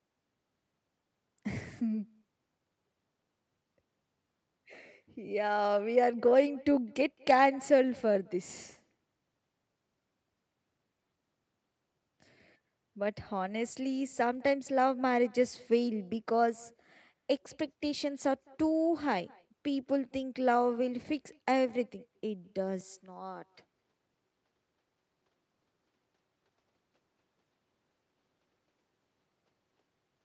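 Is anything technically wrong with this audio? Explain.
Yes. Throughout the speech, an echo with no canceller trails every phrase by roughly a fifth of a second. The far end's loudspeaker feeds its microphone, and nothing removes it. The returning copy sits about 28 dB down, faint and thin.

From 22.81 s to the end, the input switched to a poorer device, likely a different microphone or headset profile. There is no gap at the change. The level drops by around 5 dB. As in the whole clip, nothing is heard above 8 kHz because of the Opus call path, and a new noise floor appears well below the speech.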